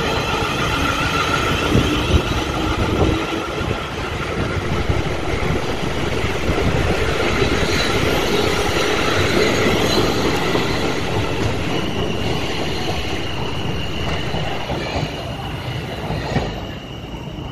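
A DC step begins at 4.66 s, where the waveform's zero line abruptly shifts by about -26 dBFS. The offset holds until 14.65 s, then steps back to where it started. A jump like this happens when a converter recalibrates or when an input carrying an offset is switched into the path. The sound itself carries on unchanged, but each of the two transitions is heard as a low thump or click.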